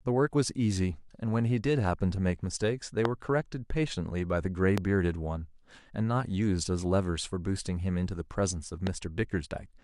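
A sharp, single loud pop cuts through the speech three times: from 3.05 to 3.07 s, from 4.78 to 4.80 s, and from 8.87 to 8.89 s. The first two jump roughly 20 dB above the surrounding level and the last about 15 dB, while the speech carries on underneath. The likely cause is a brief voltage pulse, from a switch, static discharge or a driver glitch, added to the signal.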